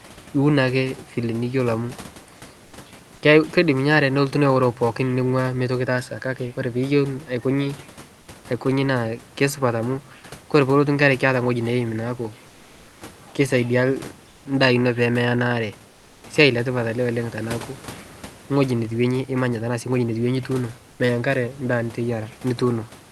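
In four pauses of this speech, the room's background gets swapped for comfort noise: 2.65 to 2.73 s, 14.29 to 14.45 s, 15.91 to 16.23 s, and 20.91 to 20.99 s. The real room tone flattens into a steady, featureless hiss, about 6 dB quieter in the first gap, about 5 dB in the second, and only about 1 to 2 dB in the last two. The likely cause is Opus discontinuous transmission, with the receiver synthesising filler noise until speech resumes.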